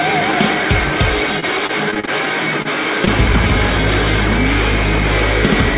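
Audio carried over a narrowband call link, with nothing above 4 kHz, which fits G.711 A-law at 64 kbps. From 1.40 to 2.67 s, repeated packet loss (robotic sound) leaves eight gaps of up to 38 ms, each patched by extending the previous sound. About 13% of that stretch is concealed, giving a choppy texture rather than one isolated blip. At 3.05 to 3.08 s, a short concealed packet loss produces a single brief smear where the receiver extrapolated the last sound and blended back. It sounds like a brief wobble rather than sustained robotic chopping.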